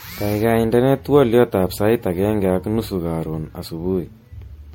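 Speech throughout carries generation loss: the sound is swirly, smeared and hollow, with consonant attacks blurred, and it is worse than a single 64 kbit/s MP3 pass would leave. It likely went through MP3 encoding and decoding about five times, each pass requantising on a shifted frame grid so the errors pile up. A spectrogram would show nothing above 16.5 kHz, with patchy holes and speckled noise between harmonics, and the waveform's transients would look rounded and pre-smeared.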